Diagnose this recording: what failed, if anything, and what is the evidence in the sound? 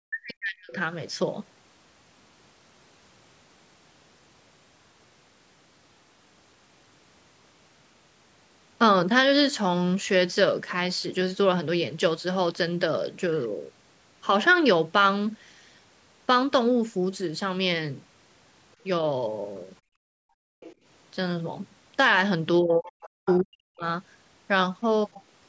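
Speech suppressed in double talk, 0.03–0.76 s, 22.63–23.05 s and 23.24–23.85 s: the talker dips by roughly 40 dB, likely the call's echo canceller ducking both sides.

Background gated by the echo canceller, 19.81–20.6 s: room sound drops about 35 dB while the far end plays, then returns.

Other side's voice leaking through, 20.6–20.75 s, 23.02–23.09 s and 23.26–23.4 s: faint scraps, roughly 15–25 dB below the speech, likely residual loudspeaker echo the canceller missed.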